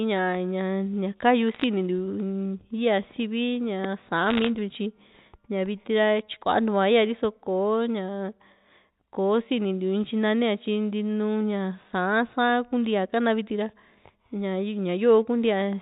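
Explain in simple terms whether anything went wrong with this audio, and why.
Two short bursts of crackle interrupt the speech, from 1.54 to 1.64 s and from 4.29 to 4.48 s, just before "ntiu tyi". These are bit errors on a digital phone line. The call travels as a stream of ones and zeros, and a small share of them, roughly one in two hundred, got flipped. Each flip spoils a single sample. That makes sharp ticks over speech that otherwise stays unchanged, with the usual narrow telephone sound.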